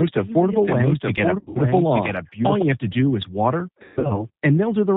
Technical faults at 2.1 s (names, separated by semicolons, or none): G.729 codec; doubled audio track